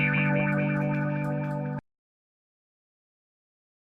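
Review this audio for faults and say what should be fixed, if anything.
An audio dropout to silence starts at 1.79 s and lasts to the end: the sound cuts off mid-flow into silence, with no room tone, likely from lost input while recording continued. To prevent it, secure connections and monitor input levels during capture.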